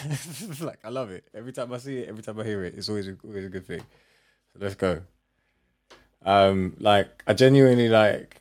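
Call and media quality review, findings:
Automatic gain falling, 0.05 to 0.85 s. Speech starts loud, then speech and background sink together by about 4 dB over roughly 0.8 s. Probable component: AGC in capture path, judging input too hot, pulling gain down gradually rather than instantly.

Automatic gain rising, 0.81 to 3.97 s. Gain reverses almost immediately, swelling speech and background together by about 14 dB over roughly 3.2 s. Probable component: same AGC, now reading input as too quiet and ramping gain up.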